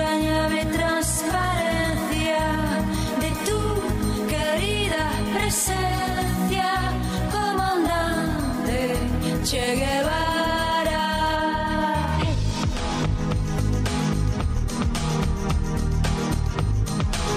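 From 11.36 to 13.36 s the sound turns dull and muffled, as if a blanket had been thrown over it, and the top end comes back once the two seconds pass. This is de-emphasis applied wrongly: a treble-cut curve meant to undo pre-emphasis was put on audio that never had that boost, or was applied a second time. The result is a smooth downward slope that leaves 10 kHz about 8 dB below 1 kHz.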